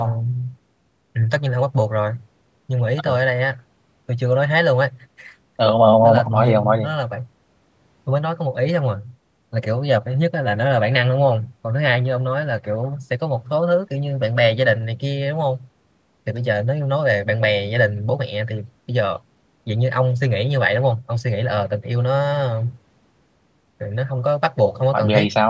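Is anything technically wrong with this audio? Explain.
No, nothing is technically wrong.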